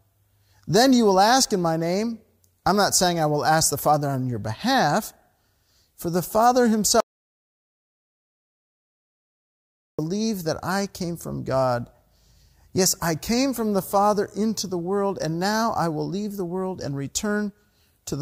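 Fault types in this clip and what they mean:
Audio dropout to silence: the speech cuts off abruptly at about 7.00 s and doesn't return until 9.99 s, so roughly three seconds are simply gone. It's dead silence, not even room tone, which tells you the recorder kept writing silence while nothing was reaching it. That likely means the input went missing for a while, through a loose connection, a dropped link or a mute. Whatever was said in that stretch can't be recovered.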